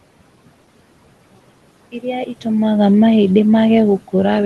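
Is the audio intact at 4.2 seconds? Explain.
No. Noise suppressor artifacts run through the whole clip, including 4.2 s: the suppressor pulls the room noise down by about 18 dB frame by frame, so the noise sinks between the words and rises under them.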